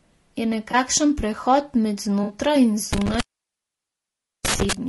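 The whole speech track has a rough, grainy edge, with noise sitting between the harmonics and a synthetic top end. That's low-delay AAC compression, likely AAC-ELD, whose short frames smear pitch detail, and the damage fits a bitrate around 32 kbps.

At 0.71 s, right before "prehod med", there's a brief smeared, noisy blip. That's AAC frame loss with concealment: the decoder patched about 20 ms, which fits one lost frame, from the last good spectrum. It happens again at 2.23 to 2.33 s, just after "prehod med", where a longer 60 ms gap (about three frames) gives a phasey wash.

From 2.93 to 4.73 s an intermittent contact kicks in, like a loose plug. The sound drops out for about 1.24 s in total, with crackle at the break edges and faint hiss where the line is open.

Inside that stretch, at 4.57 s, there's one more short concealed AAC frame loss of about 20 ms, heard as a small smeared patch.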